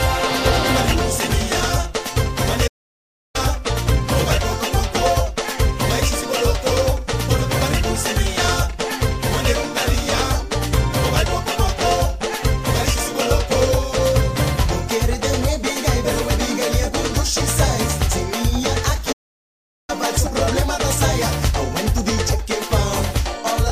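The player likely ran short of buffered data or had its output thread blocked, leaving nothing to send to the device, and the result is a playback stall heard twice: the audio cuts out mid-flow from 2.67 s to 3.36 s, a gap of about 0.67 s, and again from 19.12 s to 19.9 s, about 0.76 s. Each time the output drops to silence abruptly rather than fading, then picks up again once playback recovers.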